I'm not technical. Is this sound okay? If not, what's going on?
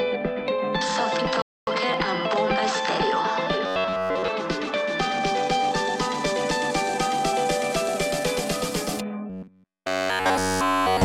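No. At 1.42 s the player ran out of downloaded audio and had to wait for more, a rebuffering stall. You hear the sound drop to silence for about a quarter of a second (0.25 s) until 1.67 s, then pick up exactly where it left off. Nothing is missing, but that pause is added time that wasn't in the original.

The second problem is robotic sound from repeated short buffers. The likely cause is that fresh audio was arriving too slowly, so the software kept replaying its last tiny slice, about 11 ms long, instead of playing what should have come next. Those rapid repeats create a steady, metallic buzz at about 94 Hz. It happens from 3.66 s to 4.29 s, where most of that stretch is repeats, and again from 9.30 s to the end, where all of it is.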